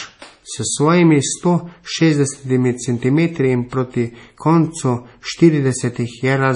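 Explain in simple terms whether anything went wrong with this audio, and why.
From start to finish the speech sounds watery and swirly, with a dull top end and nothing above about 10.6 kHz. This is likely heavy MP3 compression: starved of data, the encoder removed the treble and let faint details flicker on and off.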